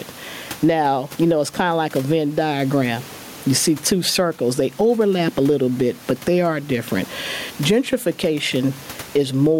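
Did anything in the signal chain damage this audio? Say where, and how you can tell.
Yes. Gain pumping runs through the whole clip, with the room noise about 32 dB below the speech and the gain swinging by around 15 dB. The likely cause is input gain set far too high at the microphone preamp and converter stage, with a fast limiter pulling it back. On a waveform the peaks look flattened to one height.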